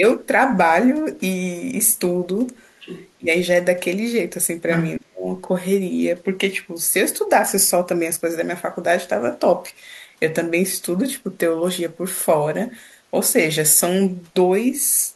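The other side's voice leaks through from 2.8 to 3.1 s, a faint second voice about 15 dB under the speech. It returns from 4.69 to 4.91 s much louder, only about 5 dB below. This is likely loudspeaker sound the echo canceller failed to remove from the microphone.

Speech is suppressed in double talk from 3.18 to 3.28 s, dipping by about 20 dB, and from 4.98 to 5.26 s, where it drops about 35 dB and nearly cuts out. Both follow the leaks, likely because the canceller mistook the overlapping talker for echo and turned everything down.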